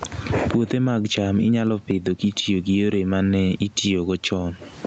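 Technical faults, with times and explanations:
Throughout: gain pumping. The gain swings by roughly 20 dB, ducking as soon as the speech gets loud, so everything sounds squashed and breathing. That's likely the mic gain set far too high, with a fast limiter clamping each peak.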